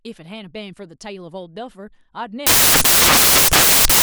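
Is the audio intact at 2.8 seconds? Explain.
No. From 2.47 s to the end of the clip, the speech is replaced by samples built from the wrong bytes. Each value is assembled with its bytes misaligned or swapped, so the rapidly changing low bits dominate. This gives loud, harsh broadband noise, close to white on loud sounds.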